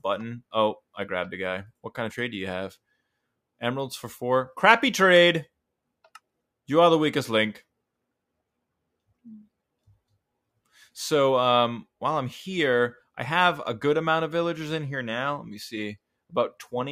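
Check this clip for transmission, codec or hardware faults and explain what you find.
One fault appears near the end. From 16.51 to 16.73 s, sound cut by the noise suppressor. It mistook the sound for noise and pulled it down by up to about 16 dB. For roughly a fifth of a second the sound sinks in level.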